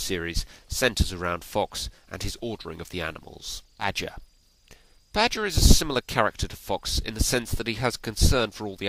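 At 3.79 s the audio skips ahead. Roughly 0.7 s of sound is gone, and nothing fills the gap. The material on either side is butted straight together. It sounds like an abrupt jump forward rather than a dropout or silence. Later audio was already queued, so playback resumed from that point. The whole delay shrank by about the same amount at once.

Right after that, jitter buffer speed-up begins. From 4.20 s to 5.39 s the audio runs at 108% speed. Roughly a tenth of a second is trimmed away in many tiny cuts, each a pitch period or so long. The pitch stays the same, but the sound feels rushed. A milder stretch follows from 5.81 s to 7.65 s at 103% speed. It removes around 70 ms in total. The hurry is subtler there. In both stretches the receiver is draining surplus buffered audio to cut latency.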